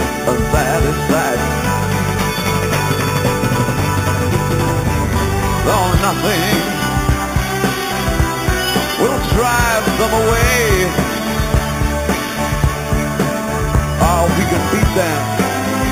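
Imaging from sample-and-hold upsampling runs through the whole clip. The sound appears to have started at 8 kHz and been raised to 44.1 kHz by simply repeating each sample, with no smoothing filter. That leaves mirror copies of the spectrum above the original band. The lowest copy fills 4 to 8 kHz, about 14 dB below the signal. It is heard as a bright, metallic fizz that swells and fades with the sound. Its pitch moves opposite to the real content.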